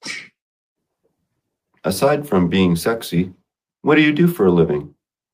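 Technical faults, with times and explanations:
No technical faults can be heard in this recording.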